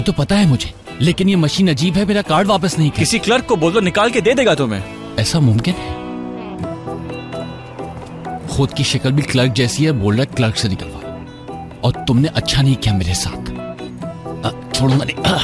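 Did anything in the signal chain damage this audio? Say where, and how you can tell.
No, nothing along the signal chain audibly damaged this audio, and its technical state gives no sign of degradation at any stage.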